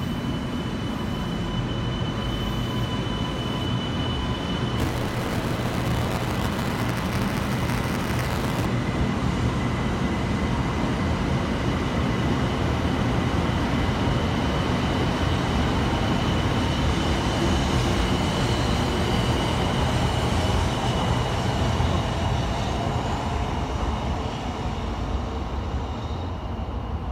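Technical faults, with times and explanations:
4.78 to 8.66 s, buffer tearing: the writing program and the playback hardware slipped out of step on the ring buffer, so every period replays audio roughly 10 ms old, joined by hard edges. This produces a robotic 200 Hz buzz that rides on the signal.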